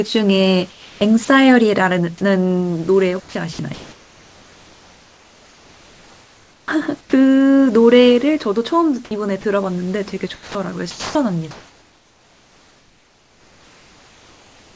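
From 0.71 to 1.28 s and again from 3.20 to 6.68 s the speech is chopped by the voice detector. The sender's detector is likely flipping on and off, so quiet syllables and word edges get swapped for synthetic noise, leaving the speech choppy.

Then come four short drops by the voice detector, at 7.01 to 7.13 s, 9.41 to 9.44 s, 10.34 to 10.55 s and 10.91 to 11.15 s. Each is likely the detector mistaking quiet speech for background and going silent, so the speech briefly gives way to steady hiss before it comes back.

From 11.51 s to the end, comfort noise replaces the background. Once the talking stops, the sender has likely stopped transmitting, and the real room noise, which is faint and band-limited to 8 kHz by the G.722 call path, is swapped for a flat, featureless hiss about 3 dB quieter.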